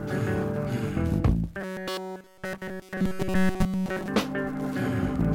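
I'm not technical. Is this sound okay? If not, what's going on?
No. From 1.61 to 4.08 s the sound turns into a rigid, metallic buzz fixed at 188 Hz: robotic sound from repeated short buffers. The likely cause is audio arriving too slowly, with nearly all of it replaced by repeats of a roughly 5 ms snippet. Unlike a general crackle or dropout, it keeps a steady droning pitch while loosely following the original sound.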